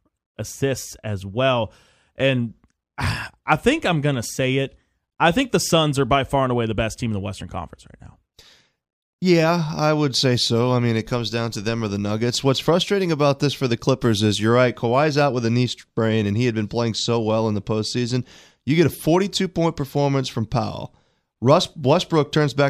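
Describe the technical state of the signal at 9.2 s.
Nothing is wrong with the signal at 9.2 s; the speech passes through intact at that point.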